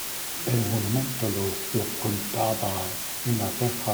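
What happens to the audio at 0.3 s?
Low bit depth with dither runs through the whole clip, including 0.3 s. The speech is held at about 4 bits, with random dither added before rounding, so the coarse steps become steady white noise: an even hiss nearly as loud as the speech, without distortion.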